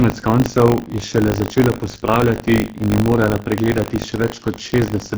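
Throughout the speech, it has passed through the AMR wideband (HD Voice) codec at what sounds like its lowest rate, around 6.6 kbit/s. The codec models the voice with a pulse-excited vocal tract filter up to 6.4 kHz and substitutes shaped noise above that, with nothing present beyond about 7 kHz. Starved of bits, the model breaks down heavily, so the voice comes out rough and raspy, with a noisy, hissy top end in place of real detail.

Buffer tearing runs across the whole clip too. The software filling the ring buffer and the hardware draining it have drifted so that they cross inside every period, which at a 50 Hz repeat points to buffers of about 20 ms. A small slice of each period, perhaps a twentieth, replays audio from roughly 70 ms earlier, with hard splices at both edges. This produces a steady robotic 50 Hz buzz riding on the speech, present only while sound is playing.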